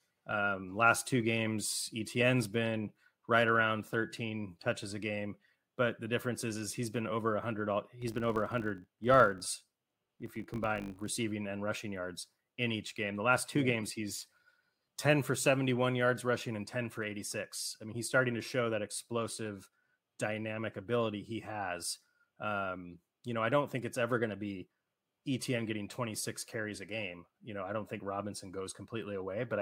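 From 8.02 s to 11.1 s the speech picks up a 50 Hz buzz caused by a filter restarted on every block. The filter drops its state at each block boundary and restarts from silence, adding a small transient fifty times a second, which fits 20 ms blocks.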